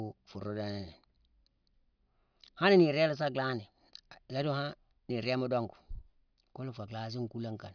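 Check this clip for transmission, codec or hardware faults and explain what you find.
No faults found in the speech; nothing here needs attention.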